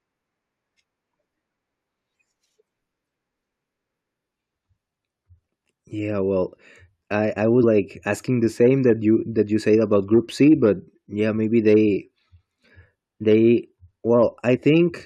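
At 7.62 s, between "I I" and "like asking the same", compressed frames are skipped. About a tenth of a second of speech is gone, which points to roughly four frames of 21.3 ms. At 14.56 to 14.58 s it happens again, with about 40 ms lost, likely two frames.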